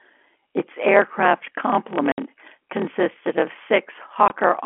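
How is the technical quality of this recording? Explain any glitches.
The recording has two clear faults on top of its narrow telephone-band sound, which stays within roughly 250 Hz to 3.4 kHz as G.711 coding does. One fault runs through the whole clip, and the other causes two brief dropouts.

Throughout, a block size mismatch with padding produces a steady 38.3 Hz buzz. One stage writes shorter blocks than the next reads, which fits 1024-sample writes, and the leftover space is filled with zeros. The speech plays at 0.889 times normal speed, though its timbre stays about the same. A waveform shows regularly spaced flat gaps, and a spectrogram shows thin vertical stripes at that rate.

At 2.12–2.18 s and 4.28–4.30 s, packet loss filled with silence cuts holes of 60 ms and 20 ms. This fits three lost 20 ms packets and then one. The receiver inserted silence in their place, so each hole has abrupt, hard edges. 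These appear as flat-line stretches on the waveform and as blank vertical bands across all frequencies.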